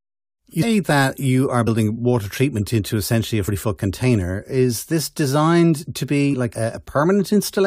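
At 0.62, 1.66, 3.47 and 6.33 s, compressed frames are skipped: the speech jumps ahead roughly 150, 100, 100 and 70 ms, consistent with missing 23 ms frames.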